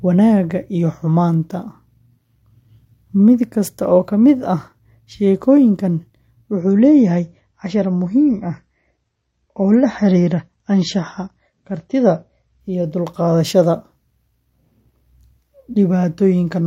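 From 6.6 to 12.6 s, after "ka mid ah sheekooyinkan", the adaptive stream dropped to a lower bitrate, consistent with roughly 32 kbit/s MP3. The treble cuts off sharply above 7.8 kHz and the change is abrupt but gapless.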